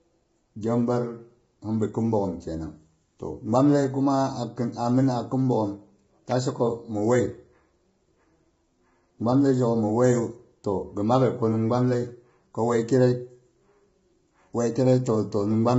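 Throughout, the speech sounds heavily coded, likely by low-delay AAC compression at a low bitrate, consistent with around 16 kbps. The coarse coding leaves a rough, grainy texture with noise between the pitch harmonics, and nothing is heard above about 7.7 kHz.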